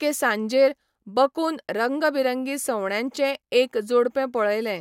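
A speech recording, and nothing is technically wrong with it.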